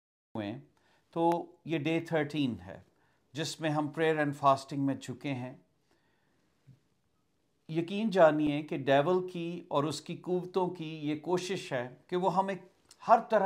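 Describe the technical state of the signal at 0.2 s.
At 0.2 s you're still in dead digital silence: it's a cut-off start. Capture kicked in late, so nothing's there from 0.0 to 0.35 s, and then the sound just appears mid-flow at 0.35 s with no natural attack or fade-in.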